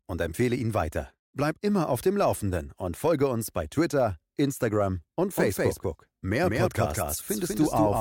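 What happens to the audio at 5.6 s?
A second copy of the same audio, likely picked up again through a slower path, is mixed in from 5.38 s to the end, so at 5.6 s you hear a doubled audio track: a full-band duplicate roughly a fifth of a second late, about as loud as the original, dry and starting abruptly.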